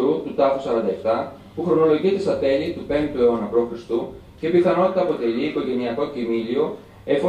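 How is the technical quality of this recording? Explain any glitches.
The technical quality is sound, and there are no glitches to explain.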